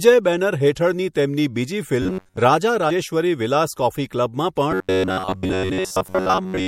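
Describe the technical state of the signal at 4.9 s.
At 4.9 s the speech has turned into a rigid, metallic buzz. It is robotic sound from repeated short buffers, running from 4.72 s to the end at 6.68 s. The buzz sits near 94 Hz, which fits a chunk of about 10.7 ms being replayed. Much of the real audio is skipped, and new audio likely arrives too seldom.

MP3 compression damage is also plainly audible here, as it is throughout. Weak detail flickers in and out, giving a watery, swirly texture. This points to a low bitrate around 64 kbps, likely from an MP3 encoder short of bits.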